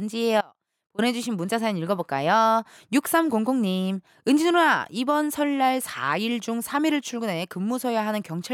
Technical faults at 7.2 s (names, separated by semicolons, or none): none